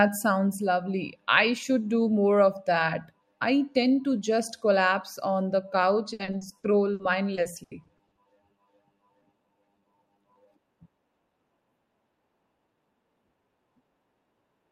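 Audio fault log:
6.13–8.19 s, repeated packet loss (robotic sound): fifteen short holes, the longest 80 ms, are patched by stretching the preceding sound. About 520 ms, a quarter of the stretch, is filled this way, so the speech turns choppy with pieces missing.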